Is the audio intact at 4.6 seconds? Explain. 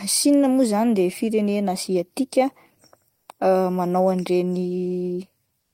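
Yes, the speech at 4.6 seconds plays through intact, with no dropout, click, distortion or other fault at that moment.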